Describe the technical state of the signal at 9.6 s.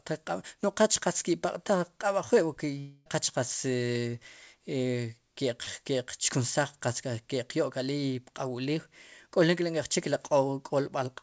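At 9.6 s the signal is intact, with only the expected character of the call path it passed through, whose codec leaves nothing above about 8 kHz.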